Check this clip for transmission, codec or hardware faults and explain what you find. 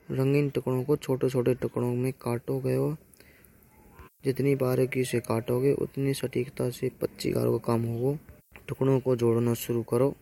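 One fault is present. Low bit depth with noise shaping, 2.04 s onward: coarse rounding, consistent with 10 bits, its error pushed upward, heard as thin hiss climbing toward the top.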